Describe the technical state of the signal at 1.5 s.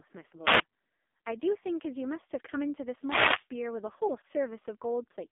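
AMR narrowband mobile codec damage is present at 1.5 s, as it is across the whole clip. The speech has been reduced to an 8 kHz-sampled signal and rebuilt from a vocal-tract model excited by a handful of pulses per short subframe. The line band sits roughly between 250 Hz and 3.6 kHz, with nothing above 3.7 kHz. The heavy buzzy, synthetic quality points to one of the lowest AMR-NB bitrates, near 5 kbps.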